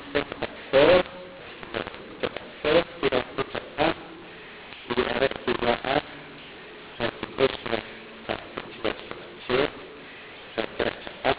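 A mu-law and A-law mix-up runs throughout the speech: telephone audio encoded with A-law is being decoded as mu-law. The scrambled level mapping makes the voice harsh and distorted, lifts the quietest samples above silence so pauses hiss, and leaves nothing above 4 kHz from the 8,000-sample-per-second coding.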